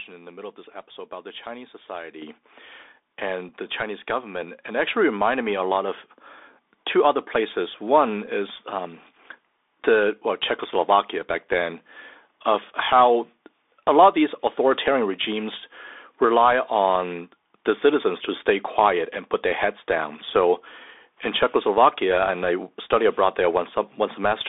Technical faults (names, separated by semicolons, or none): Bluetooth CVSD headset codec; microphone volume stepped up; Bluetooth headset packet repeated